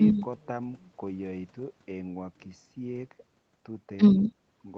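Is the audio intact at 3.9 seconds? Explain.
Yes, the speech at 3.9 seconds is intact, with no dropout, glitch or other fault at that moment.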